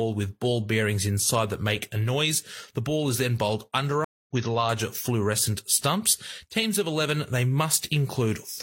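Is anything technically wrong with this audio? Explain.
Yes. A stream reconnect occurs from 4.04 to 4.30 s, after "ball is then bowled". The connection dropped and the player restarted its decoder mid-stream, leaving 220 ms of silence. The speech then resumes roughly a fifth of a second later, at "with larger fluorescent stumps".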